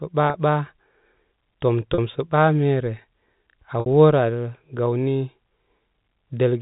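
Packet loss with pitch repetition occurs in this speech at 0.30 s, 1.94 s and 3.80 s. Gaps of 40, 40 and 60 ms are filled by repeating the last pitch period, so the two 40 ms gaps sound like a brief held, buzzy note. These lengths fit two or three lost 20 ms packets, carried over a G.711 telephone path that passes nothing above 4 kHz.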